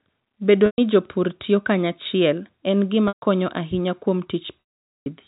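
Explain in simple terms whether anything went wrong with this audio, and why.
The sound briefly stalls into a held, buzzy tone at 0.66–0.78 s, just before "jopur tiyo kanyachiel en", and at 3.08–3.21 s, before "konyo ahinya kuom". After "konyo ahinya kuom", at 4.61–5.06 s, it fades to silence for nearly half a second. This is packet loss with pitch repetition: chunks of audio went missing, and the receiver covered each gap by repeating the last bit of sound, fading it out when the gap ran long.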